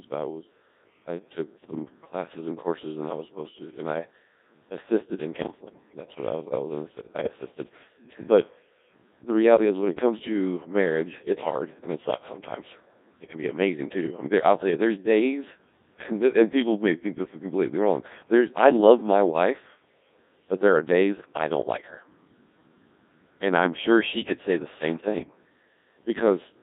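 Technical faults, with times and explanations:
Throughout, Codec 2 vocoder: the speech comes out robotic and buzzy, with heavy damage and a band of roughly 200 Hz to 3.7 kHz. The decoder rebuilds the voice from sine waves using only pitch, voicing, energy and envelope, which fits a 1.6 kbit/s mode.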